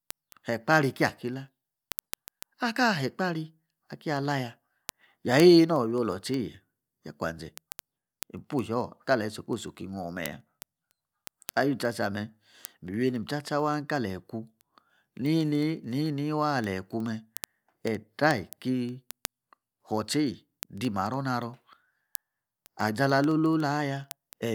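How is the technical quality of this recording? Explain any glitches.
The recording has a clocking fault, heard as word clock ticks from 0.11 s to the end: the receiving device's clock, roughly 300 ppm off the sender's, slips one sample about every 70 ms, producing around 300 sharp, steady ticks.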